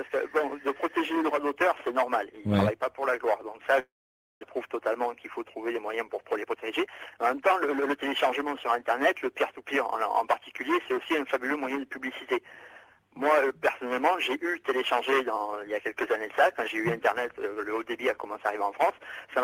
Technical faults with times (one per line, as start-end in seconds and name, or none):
3.79-4.45 long network dropout
6.30-8.16 jitter buffer speed-up